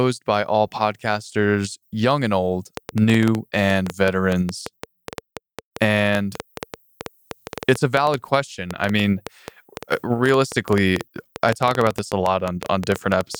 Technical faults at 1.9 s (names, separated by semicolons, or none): none